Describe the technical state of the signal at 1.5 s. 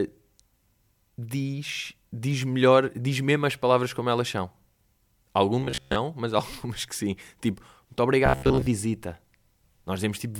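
Nothing is wrong with the signal at 1.5 s, where the speech runs intact with no audible fault.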